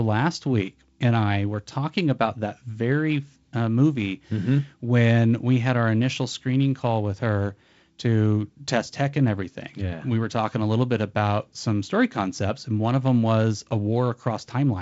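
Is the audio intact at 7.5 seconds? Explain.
Yes, at 7.5 seconds the speech is intact, carried by G.722 wideband telephone coding at 48 kbit/s with nothing above about 7.7 kHz.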